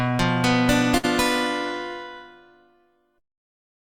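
A burst of packet loss hits the audio from 0.97 to 1.05 s. Several consecutive packets went missing. The receiver stretched the last sound for about 60 ms while fading it down. The audio then resumes with roughly 60 ms skipped.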